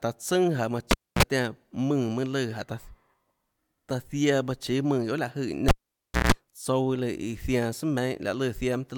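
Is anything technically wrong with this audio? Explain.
Yes. A cable is pulled and plugged in twice, at 0.91 to 1.23 s and 5.68 to 6.32 s. A pop starts each, then near silence for 269 and 588 ms. As the plug tip touches first, 60 Hz mains buzz sounds for 40 and 156 ms before a second pop restores the speech. The pops and buzz set it apart from a clean dropout.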